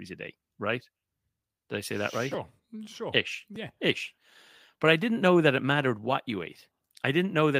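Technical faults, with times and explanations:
No technical faults can be heard in the speech recording; the signal holds steady with no interruptions, distortion or level problems at any point.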